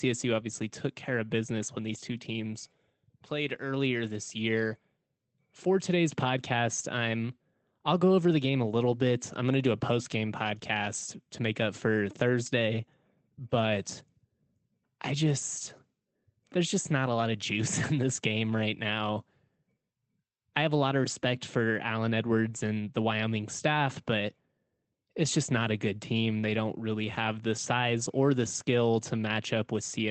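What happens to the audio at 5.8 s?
Nothing goes wrong at 5.8 s: the speech there is intact, carrying only the ordinary coding character and roughly 8 kHz upper band limit of the call path it passed through.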